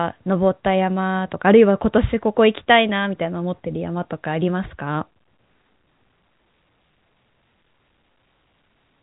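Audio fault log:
Nothing here needs logging; the speech just arrives over an ordinary G.711 telephone line, with the narrow phone-band sound you'd expect since nothing above about 3.8 kHz gets through.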